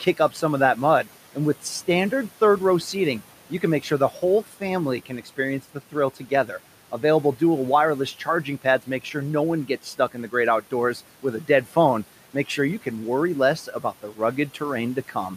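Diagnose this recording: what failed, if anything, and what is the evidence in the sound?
Call processing: the noise suppressor cut speech at 5.06–5.38, 6.16–6.49 and 13.66–14.19 s, treating it as noise and ducking it by about 9–10 dB.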